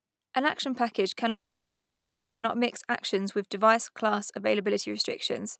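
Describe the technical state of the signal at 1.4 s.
At 1.4 s the signal is inside a call audio freeze that runs from 1.29 to 2.45 s, right after "action package". The likely cause is packets stalling in transit, so the jitter buffer ran dry. The receiver stretched the last sound into a brief fading tail, then went silent for about 1.06 s. When packets resumed, the audio picked up at "mix actions with device" with nothing lost, now running 1.14 s later.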